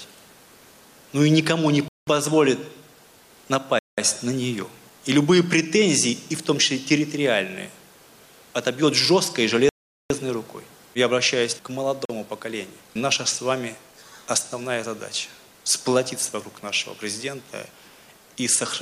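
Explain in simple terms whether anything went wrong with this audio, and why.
The sound cuts to silence at 1.88, 3.79, 9.69 and 12.05 s, for up to 0.41 s: likely Bluetooth stalls, with the headphones briefly running out of audio.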